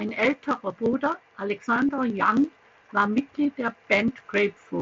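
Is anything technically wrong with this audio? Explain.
Yes. At 1.87 s there is a brief concealed Bluetooth headset packet loss, about 15 ms, which fits two lost headset packets. The phone filled the gap by repeating a closely matching slice of the preceding speech. It sounds like a short buzzy tone held at full level, with a small warble where real audio returns in the mSBC wideband audio.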